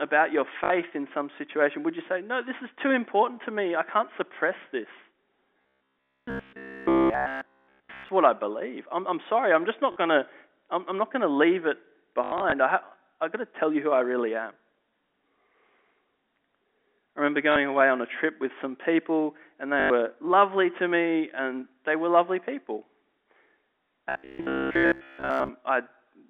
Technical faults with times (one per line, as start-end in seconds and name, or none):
0.64-0.70 packet loss with last packet repeated
5.61-8.09 robotic sound from repeated short buffers
9.92-9.96 packet loss with last packet repeated
12.24-12.52 packet loss with last packet repeated
17.52-17.56 packet loss with last packet repeated
19.80-19.90 packet loss with last packet repeated
24.09-25.50 robotic sound from repeated short buffers